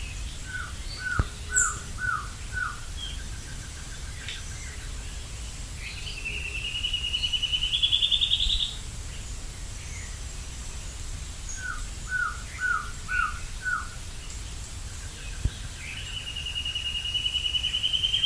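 There are no technical faults to describe in this audio.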